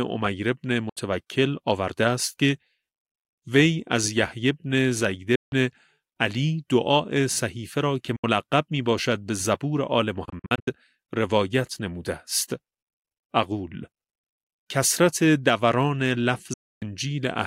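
The wireless link likely failed to deliver audio in time, a Bluetooth dropout, causing silent holes at 0.89–0.97, 5.35–5.53, 8.16–8.24 and 16.53–16.82 s, with scattered short gaps across 10.25–10.68 s. The sound cuts out sharply and resumes further along, as though it had kept playing.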